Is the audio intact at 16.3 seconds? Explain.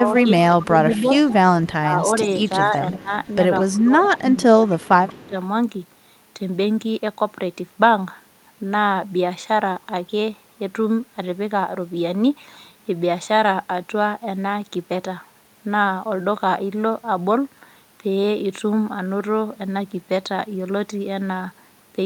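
Yes, the audio at 16.3 seconds is intact, with no fault heard at that moment.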